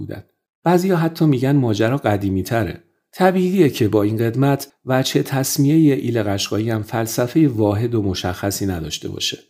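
No technical faults can be heard anywhere in the speech recording; the signal stays steady and intact throughout.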